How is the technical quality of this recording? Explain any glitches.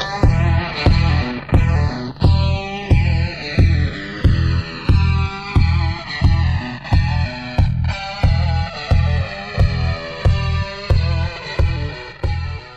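The recording has one real problem, and it runs the whole way through: the channels drifting apart. The left and right sides seem to come from two devices on separate clocks that disagree by something like a couple of hundred parts per million, so the delay between them keeps creeping until it reaches around 2 ms by the end. Fold it to mono and the comb-filter notches glide slowly through the spectrum, giving a lazy flanging swirl over the sound.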